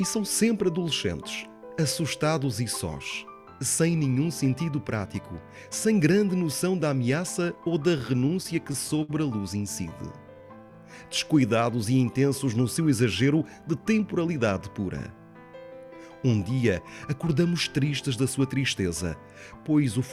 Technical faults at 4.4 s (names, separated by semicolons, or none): none